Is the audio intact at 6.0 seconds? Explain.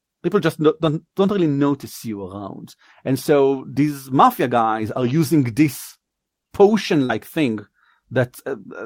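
No. A lost packet rebuilt from error correction runs from 5.89 to 5.95 s. About 40 ms, which fits two packets, was played from low-bitrate backup copies, so it sounds rougher and noisier. Then a short concealed packet loss spans 5.97 to 6.02 s. About 20 ms never arrived, and the decoder filled 27 ms by extending the preceding sound, heard as a brief smear or wobble.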